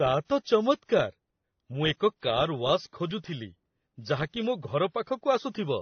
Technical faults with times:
0.00-5.81 transcoding between lossy codecs

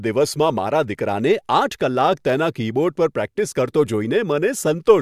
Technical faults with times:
none

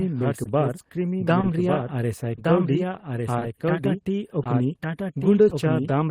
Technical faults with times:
0.00-6.11 doubled audio track
0.00-6.11 clock drift between sender and receiver
0.43-0.47 short stall from a late packet
5.49-5.53 short stall from a late packet

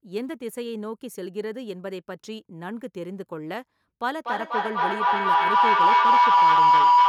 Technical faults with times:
4.13-7.09 feedback howl

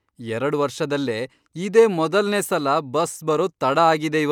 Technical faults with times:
none

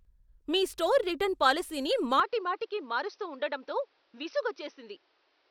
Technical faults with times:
2.20-5.51 input switched to a poorer device

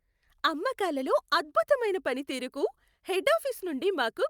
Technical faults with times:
none

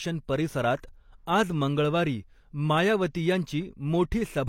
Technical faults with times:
0.82 pre-echo

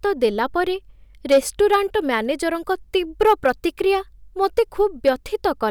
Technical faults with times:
1.31-1.38 hard clipping
3.21-3.50 hard clipping
4.44-4.60 hard clipping
5.07 hard clipping

